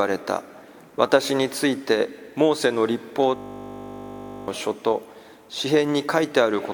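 At 3.36 s the sound locks into a steady 50 Hz buzz that lasts until 4.48 s. This is a system hang loop: playback froze while the hardware kept replaying one 20 ms stretch of its ring buffer, losing about a second of audio.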